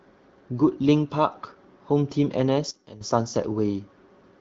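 At 2.71 s the speech abruptly drops by about 13 dB, background included, and stays low until 3.01 s before snapping back. This is a sudden gain jump, likely a digital gain setting applied instantly without any ramp, both down and up.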